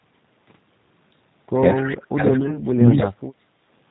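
Throughout the clip, the speech carries the sound of the G.729 codec, here the G.729A variant. The damage is plainly audible. Nothing above 4 kHz survives, so the speech sounds narrow and boxed in. The codec does not send the waveform itself. It sends a filter shape, a pitch estimate and a few pulses for each short frame. The decoder then rebuilds the speech from those. That rebuilding gives a rough, slightly synthetic edge. The coarse result fits an 8 kbit/s stream.

From 1.75 to 1.88 s, a brief echo leak breaks through. A faint, delayed copy of the sound appears about 206 ms behind the original, at about 15 dB below the main speech. It is a short scrap. The likely cause is a far end playing the call on a loudspeaker. Its echo canceller did not fully remove what its microphone picked up. The leftover was sent back.

Starting at 1.81 s and running to 3.2 s, the speech is suppressed in double talk. 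The talker's level sags and drops out in pieces, totalling roughly a second. At its deepest, the loss is around 30 dB. The likely cause is both sides talking at once. The echo canceller could not tell the near talker from loudspeaker echo. So it turned everything down, and the wanted speech was pulled down too.

Inside that stretch, from 2.40 to 2.63 s, comes VoIP packet loss concealed by the speech codec. About 40 ms of audio is missing, scattered over roughly 120 ms. No gap is longer than 10 ms, which points to single lost 10 ms frames. The decoder filled each hole by stretching its last pitch and filter. The result is brief buzzy, smeared moments. Because each frame builds on the last, the sound stays weakened a little past the losses.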